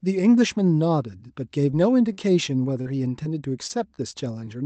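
Short concealed packet loss at 1.71 s: about 20 ms of the call arrived too late, and the receiver patched the hole by extending the preceding sound, leaving a brief smear. A burst of packet loss follows at 2.13 to 2.19 s. Several consecutive packets were dropped, and the receiver stretched the last sound over roughly 46 ms while fading it, so about 40 ms of real audio is skipped. Further short concealed packet loss occurs at 2.81 to 2.87 s and 3.23 to 3.27 s, where 40 ms and 20 ms gaps respectively are bridged with synthesized continuation, heard as a wobble. Repeated packet loss (robotic sound) runs from 3.67 to 4.49 s. Four separate gaps, the longest 22 ms, are each papered over in turn, giving a choppy texture with fragments missing.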